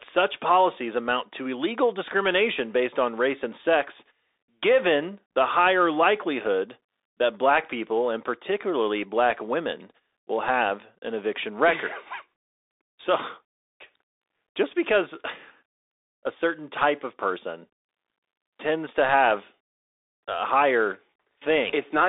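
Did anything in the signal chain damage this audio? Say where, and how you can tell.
Yes, at the codec stage, throughout the clip. This is a Bluetooth CVSD headset codec. The speech sits in a narrow band of about 300 Hz to 3.7 kHz, and nothing passes above 3.8 kHz. That points to a 64 kbps one-bit delta stream. Each sample only steps up or down, and the step size adapts. Loud, bright sounds outrun the step and distort. The s sounds turn scratchy, and a granular hiss lies under the speech.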